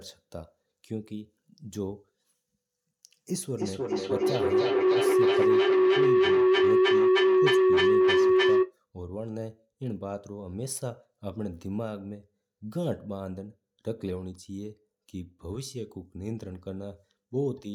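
A microphone-loudspeaker loop gaining level each pass causes feedback howl from 3.05 to 8.79 s, ringing near 400 Hz, pulsing every 0.3 s or so, peaking about 11 dB above speech.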